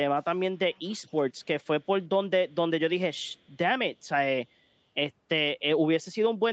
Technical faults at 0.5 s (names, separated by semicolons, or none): echo leak